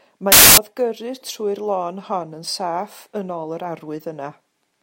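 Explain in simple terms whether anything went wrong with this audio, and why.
Samples built from the wrong bytes: from 0.32 to 0.58 s, the speech is replaced by a loud burst of harsh hiss. Digital audio stores each sound sample as several bytes, and here the player stitched them together in the wrong order or alignment. The tiny, fast-changing details ended up as the biggest part of each value, so the sound turned into noise.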